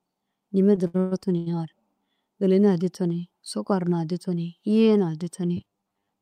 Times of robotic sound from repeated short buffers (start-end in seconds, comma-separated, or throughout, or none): 5.57-6.21